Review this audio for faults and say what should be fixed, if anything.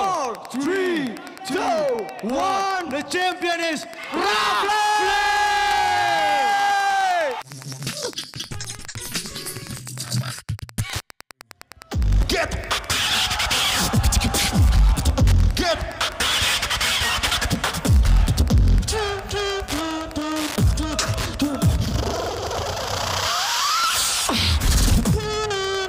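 There's Wi-Fi interference the whole way through: a steady tick every 102.4 ms, about 20 dB below the sound, where the circuit rectifies a nearby radio's beacon. Keep routers and phones away from the recording chain, or shield it.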